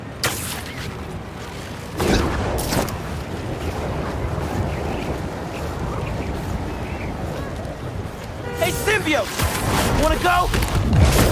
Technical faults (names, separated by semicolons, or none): none